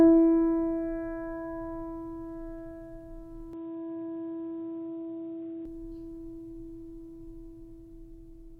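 From 3.53 to 5.65 s the music turns dull and boxy, with no gap at either edge, likely because the input switched to a poorer device. A spectrogram shows nothing above 3.8 kHz, plus a faint new noise floor; the waveform's level shifts by around 5 dB.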